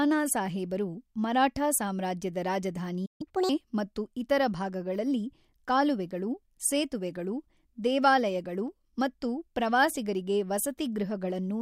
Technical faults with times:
3.05-3.21 playback stall
3.21-3.49 catch-up at higher speed

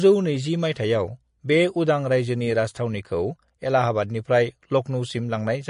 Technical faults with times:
0.00-5.70 MP3 compression

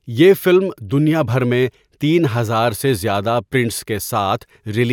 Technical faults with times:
none

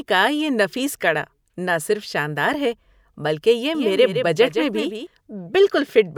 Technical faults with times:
3.75-5.07 doubled audio track

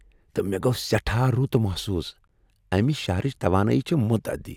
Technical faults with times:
2.27 gap at a join of encoded pieces

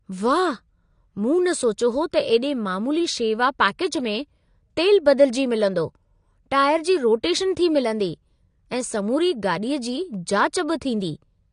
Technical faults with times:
0.00-11.52 AAC compression

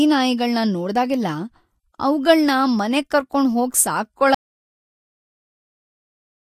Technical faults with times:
4.34-6.56 audio dropout to silence

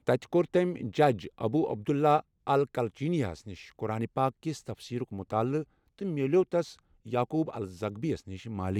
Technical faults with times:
none

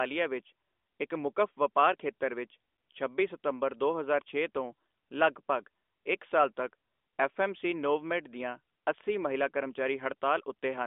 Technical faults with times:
none

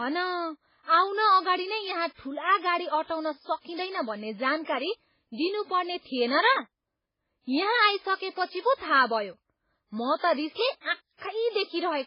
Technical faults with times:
0.00-12.06 MP3 compression

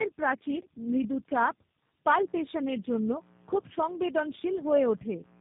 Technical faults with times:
0.00-5.41 tandem speech coding
2.15-5.41 mains buzz

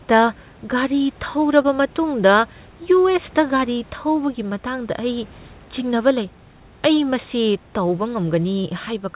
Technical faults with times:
1.62-1.66 short concealed packet loss

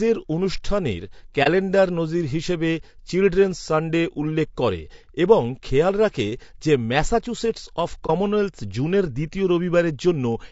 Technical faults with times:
0.00-10.52 low-delay AAC compression
1.43-1.47 AAC frame loss with muting
8.06-8.10 AAC frame loss with muting

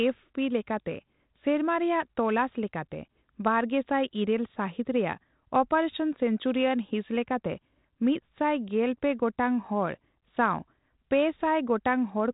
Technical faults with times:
none

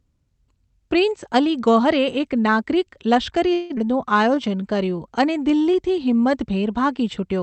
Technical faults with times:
3.53-3.79 long network dropout
3.85-4.98 jitter buffer slow-down

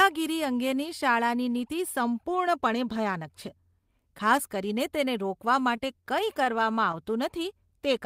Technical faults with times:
5.59-6.96 scattered short gaps

